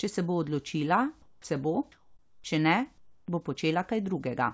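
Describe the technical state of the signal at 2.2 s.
At 2.2 s the background is replaced by comfort noise, from 1.92 to 2.44 s, between "bo odločila se bo" and "če ne bo". For about half a second the room's natural texture becomes a steady, featureless hiss at the same level, about 40 dB below the loud passages. Discontinuous transmission likely halted the sender during the pause, leaving the receiver to synthesise shaped noise. Unlike a dropout or noise gate, nothing falls silent or dips; only the detail vanishes. Throughout, the call codec passes nothing above 8 kHz.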